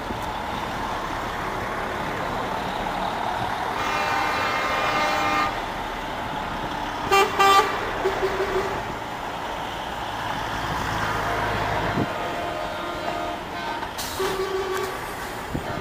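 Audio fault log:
0.44–1.45 s, 2.78–3.14 s, 4.86–5.50 s, 8.49–9.05 s, 10.19–11.07 s, 12.64–13.47 s: DAB burbling, bursts of short noise blips in separate frequency bands, because weak reception lets bit errors of well under one percent slip past error correction into the MP2 audio data.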